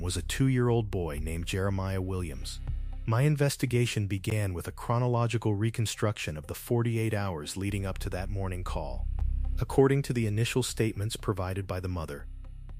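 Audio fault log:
4.30 s and 9.20 s, block of digital silence: the audio path likely twice failed to deliver samples in time and zeros filled the gap, about 14 ms then 5 ms (the second fits a 256-sample buffer). The abrupt drop to silence and back is heard as brief ticks.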